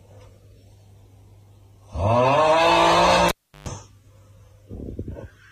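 Cable pulled and plugged in, from 3.29 to 3.68 s: a pop cuts the sound to near silence for about 348 ms. While only the plug tip touches, a 124 ms burst of 50 Hz mains buzz leaks in, and a second pop marks the signal returning.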